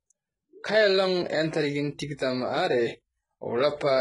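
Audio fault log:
Throughout, HE-AAC compression: the encoder likely carried only the lower part of the spectrum and rebuilt the treble by copying lower bands upward under a coarse envelope, which fits a very low bitrate around 12 kbps. The damage is heavy. Above the crossover the speech's harmonics no longer line up, so s sounds come out gritty, metallic or lispy, and nothing at all remains above 11.1 kHz.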